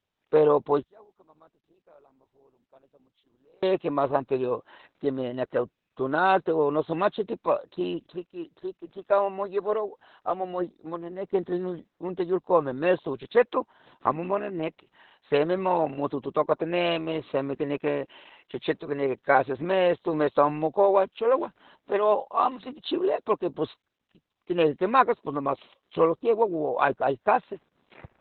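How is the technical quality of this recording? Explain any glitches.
The quality is poor: the whole recording carries heavy low-bitrate speech compression, and near the start the speech almost disappears for a few seconds.

Opus voice compression runs throughout. The coder works in its SILK linear-prediction mode in narrowband, so nothing above about 4.3 kHz survives, and the 20 ms frames have their excitation coded very coarsely, which points to a rate around 8 kbps. The result is muffled, hoarse, slightly robotic speech with a boxy, telephone-like top end.

One channel inverted is the likely cause of the dropout from 0.83 s to 3.63 s. The level falls by about 34 dB and the speech shrinks to a faint residue. If one stereo channel had its polarity flipped, the material common to both would cancel when summed to mono, leaving only the small difference between them.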